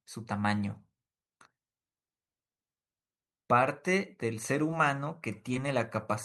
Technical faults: short concealed packet loss

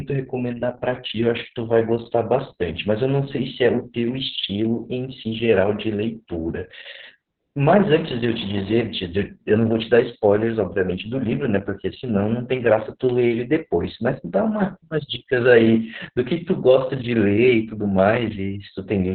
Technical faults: Opus voice compression

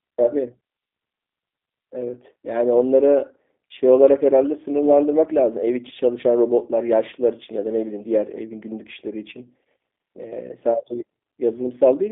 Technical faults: G.729 codec

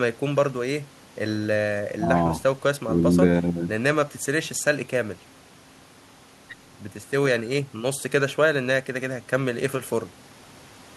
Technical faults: none

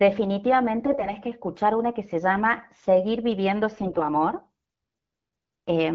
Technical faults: AMR bit errors

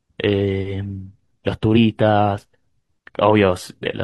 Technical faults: damaged data in a compressed stream

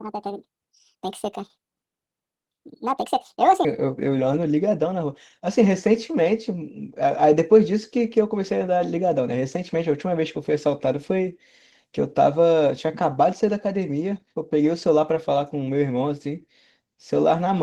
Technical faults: Opus voice compression; section at the wrong speed

